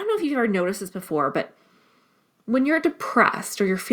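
Right after "noticed this", at about 1.02 s, there's a microphone volume stepped up: the call software judged the mic too quiet and bumped the input gain in one go, so voice and background both jump by about 4 dB together.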